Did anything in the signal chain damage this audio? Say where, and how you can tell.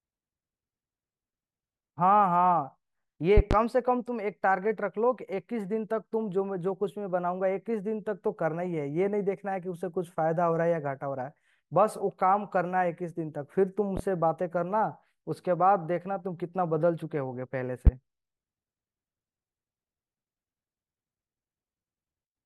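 Yes. Loud pops sit on top of the continuing speech: a double pop at 3.37–3.55 s, then single pops at 13.97–14.01 s and 17.87–17.90 s, peaking roughly 10 to 20 dB above it. This is likely a voltage step in the analogue wiring, from a plug or switch.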